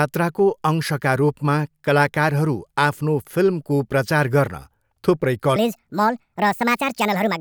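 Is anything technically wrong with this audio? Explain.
Yes. A section at the wrong speed runs from 5.56 s to the end at 7.40 s. From that point the speech plays back 1.53 times faster than it was recorded, so pitch and tempo jump together: the voice suddenly sounds higher, by roughly seven semitones, and hurried, with syllables squeezed closer. The likely cause is that this last stretch was played or resampled against the wrong clock, for example a mismatched sample rate applied to only that part of the audio.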